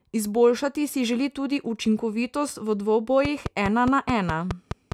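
Right after "želi tudi učinkovitost v", at 3.25 s, a train of clicks starts and runs to the end at 4.93 s. It's around ten sharp ticks of much the same shape, evenly spaced at 4.8 per second, and they poke out roughly 10 dB above the speech, so they're hard to miss. The likely culprit is interference from nearby gear or a faulty connection or power supply injecting a pulse on a steady cycle.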